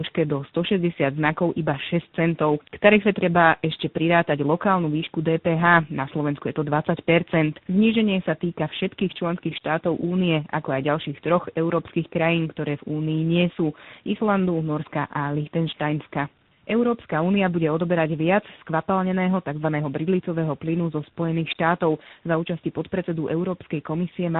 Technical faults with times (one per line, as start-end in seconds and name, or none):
0.00-24.40 tandem speech coding